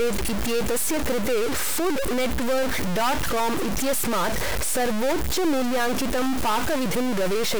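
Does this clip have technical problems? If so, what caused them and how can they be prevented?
Yes. Throughout the speech there is a harsh, buzzy distortion riding on every sound, and the pauses are filled with a steady hiss instead of going quiet. The likely cause is a stuck bit: one bit of each sample is held at a fixed value, so about half the samples are pushed off by a fairly large step, roughly -20 dBFS. That error follows the waveform, producing the buzz, and flips with the sign of quiet samples, producing the noise in the gaps. To prevent it, check the converter and its data connections, and test the chain with a silent or low-level signal before recording.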